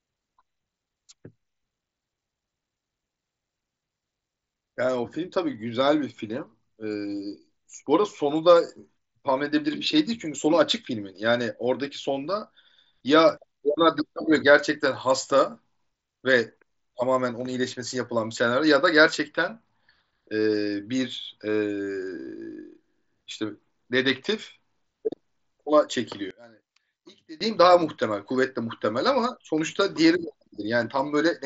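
At 26.31 s the speech suddenly collapses, dropping by about 24 dB until 27.41 s. Centred content nearly vanishes, leaving only a faint trace. The likely cause is one channel inverted: one stereo channel had its polarity reversed, so on a mono sum the shared signal cancelled itself out. Only the small difference between the channels survives. The surrounding audio, carried over an mSBC Bluetooth headset link, stops near 7.7 kHz.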